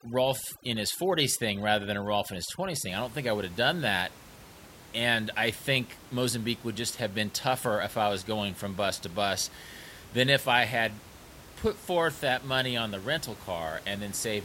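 Right from the start, 0.0 to about 2.89 s, there's overdone noise removal on the speech. The noise reducer was pushed too hard, so any frequency band sitting close to its noise estimate gets pulled way down or shut off entirely, and the softer parts of the voice get caught along with the noise. You hear the background drop and break up into little twinkly specks. The room noise, about 20 dB under the speech, is simply part of the recording.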